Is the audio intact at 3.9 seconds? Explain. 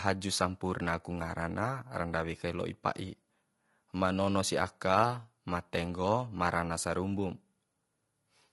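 No. At 3.9 seconds the speech shows low-delay AAC compression, present throughout the clip rather than at that moment alone, and likely from an AAC-ELD encoder at a bitrate that fits about 32 kbps. Its low-delay frames leave few bits per frame at this bitrate, so the voice sounds plainly rough and grainy, with noise filling the gaps between harmonics and a thin, synthetic-sounding top band.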